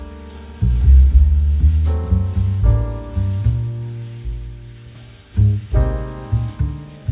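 No technical faults can be heard anywhere in this audio.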